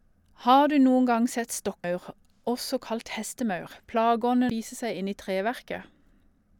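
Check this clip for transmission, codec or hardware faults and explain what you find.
Two brief faults of one kind turn up in this speech clip. Damaged data in a compressed stream occurs at 1.84 to 1.87 s, just after "du noen gang sett", and again at 4.50 to 4.53 s. Corrupted bytes make the decoder misread frames and lose sync while hunting for the next header, producing a short chirp, squawk, click or hole of about 30 ms each time.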